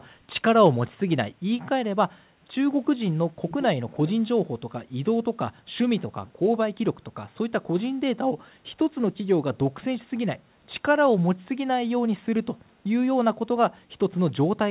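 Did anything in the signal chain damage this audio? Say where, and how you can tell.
Yes. Echo leak in call processing, 3.49 to 3.67 s. A faint speech copy returns 389 ms late, likely slipping past a loudspeaker-side echo canceller.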